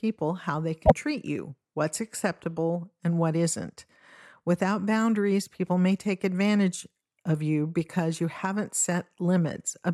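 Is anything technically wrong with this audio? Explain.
Yes. There is one fault. From 0.85 to 0.92 s, between "how they" and "treat you what's acceptable", the speech jumps ahead with a brief chirp, burst of noise or short hole. This is likely a broken MP3 bit reservoir. Frames were lost, and the next ones decoded against the wrong borrowed bytes. The 66 ms glitch fits a few 24 ms frames.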